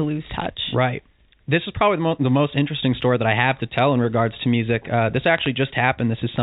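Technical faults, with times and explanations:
0.35–0.46 s, bit errors on a digital phone line: a short cluster of sharp ticks over unchanged speech on the G.711 mu-law path. Each flipped bit corrupts a single sample, and hits on the sign or high-order bits produce the loudest clicks. On a waveform these are isolated one-sample spikes. On a spectrogram they are thin vertical lines reaching up to the 4 kHz ceiling.
5.35–5.47 s, bit errors on a digital phone line: a second burst of crackle at a similarly low error rate, around a fifth of a percent. It shows the same lone spikes and full-band vertical streaks as the first burst.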